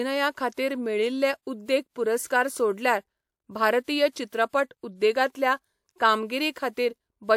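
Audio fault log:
2.27–2.30 s, 4.28–4.32 s and 6.72–6.77 s: pre-echo. A short hiss runs ahead of three sharp speech onsets, for about 33, 47 and 50 ms. The first sits just before "सोडल्यार भारतीय", and the second comes just after it. The codec spread its quantisation noise across each transform block. That noise was sized for the loud attack late in the block, so it leaked into the quiet gap before it. Each onset therefore sounds softened and smeared.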